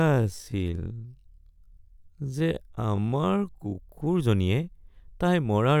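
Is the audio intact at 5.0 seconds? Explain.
Yes, the audio is intact at 5.0 seconds, with no audible fault at that point in the speech.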